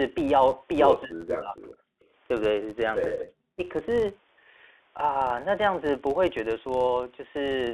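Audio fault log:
throughout, filter restarted on every block: a steady buzz near 93.8 Hz that rises and falls with the signal level, as a filter restarts from silence each block, fitting a 512-sample block.
1.04–1.56 s, speech suppressed in double talk: the speech dips by roughly 25 dB for about half a second, likely an echo canceller turning down the talker while both sides spoke.
1.84–2.0 s, background gated by the echo canceller: the room sound drops by about 21 dB for around 150 ms as the canceller clamps the microphone during loudspeaker playback, then recovers.
2.0–2.07 s and 3.18–3.52 s, echo leak: a delayed copy trailing 244 ms behind, first faint at roughly 40 dB down, then clearer at roughly 15 dB down, likely loudspeaker pickup the canceller missed.
3.04–3.06 s, packet loss with pitch repetition: a brief held, buzzy note where 20 ms of audio went missing and the receiver repeated the last pitch period to bridge it.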